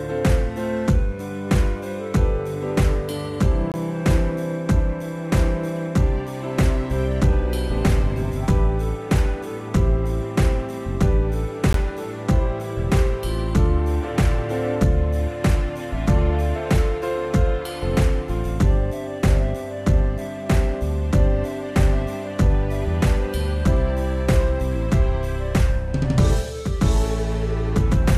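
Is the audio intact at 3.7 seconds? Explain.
No. From 3.72 to 3.74 s there is a gap between stream segments: two segment timestamps, which fit a 4-second segment length, leave about 22 ms uncovered, and the player fills it with hard-edged silence. Unlike a dropout, no audio is lost, and the sound resumes exactly where it stopped.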